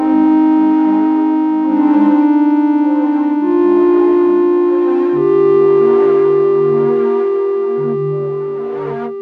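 No technical faults are audible.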